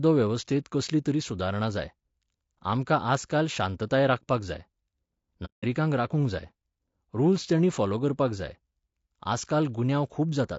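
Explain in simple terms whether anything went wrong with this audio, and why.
Throughout the clip, the speech sounds rough and grainy, with a thin, artificial top end, likely from low-delay AAC compression squeezing the audio too hard for a call. From 5.45 to 5.65 s, the sound fades briefly into silence and back. This is AAC frame loss with muting: chunks of audio never arrived and the decoder filled them with silence.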